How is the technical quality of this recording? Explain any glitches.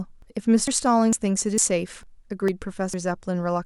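The speech is interrupted by regular skips. At 0.22, 0.68, 1.13, 1.58, 2.03, 2.48 and 2.94 s, roughly 50 ms of audio vanishes and the two sides butt straight together. This is likely audio missing between chunks, lost as a processor handling about half-second blocks closes one and opens the next. Unlike a dropout, no silent gap is left, and the evenly spaced timing points to block boundaries rather than random loss.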